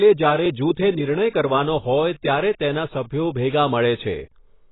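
From start to finish the speech is dull and smeared, with nothing above about 3.9 kHz and a warbling, fizzy texture on sustained sounds and sibilants. This is heavy AAC compression, likely from AAC-LC at a very low bitrate in the region of 16 kbps. The encoder discarded the top of the spectrum and coarsely quantised what remained. A plain low-pass filter would also sound dull, but it would not cause this smearing and swirling grain.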